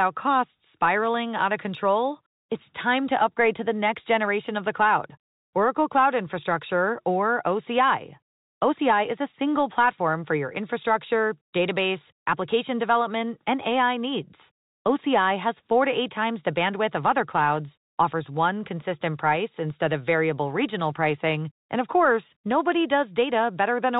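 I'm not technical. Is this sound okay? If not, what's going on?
Yes, this one's fine: it's speech with the narrower, slightly boxed-in sound of an ordinary landline phone call, and that's just how telephone audio normally sounds, not a problem.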